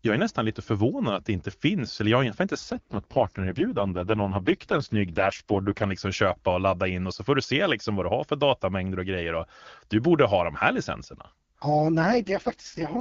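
Swedish speech over an HD Voice call turns rough, buzzy and synthetic from 2.59 to 5.84 s, between "eller jag har inte" and "liksom köpa och ladda", and again from 12.01 to 12.98 s, with no gap and no loss of bandwidth. These are AMR rate drops. The AMR-WB codec is switched down to a lower mode, the sound fitting a fall from 23.85 to 6.6 kbit/s, leaving too few bits to model the voice cleanly until the rate recovers.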